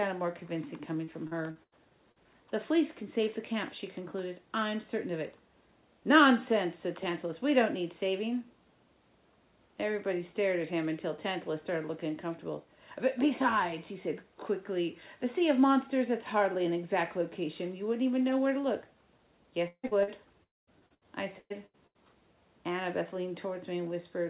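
Repeated packet loss (robotic sound) runs from 1.04 to 1.75 s: four gaps, the longest 85 ms, patched by extending the preceding sound, so about 28% of that span is synthetic. The audio turns choppy, with fragments missing.

Short concealed packet loss follows at 2.12 to 2.19 s, where about 40 ms failed to arrive in time. The receiver bridged it by continuing the last sound, which leaves a brief smear or wobble before the real signal resumes.

A long network dropout is the likely cause at 19.68 to 19.86 s. About 160 ms is lost, and a fading continuation gives way to roughly 60 ms of silence before the sound returns with that part gone.

Two more short concealed losses come right after, at 19.87 to 19.94 s and 20.03 to 20.10 s, each about 40 ms filled in and heard as small wobbles.

A second long network dropout is likely behind 20.43 to 20.70 s. About 240 ms is missing, and after a short fading tail about 200 ms of silence remains before the audio picks up again past the lost portion.

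Repeated packet loss (robotic sound) returns from 20.79 to 21.98 s. There are six gaps, the longest 119 ms, and about 35% of the stretch is concealed. The result is a choppy, broken texture with chunks absent. Throughout, nothing is heard above 4 kHz, consistent with a narrowband call codec.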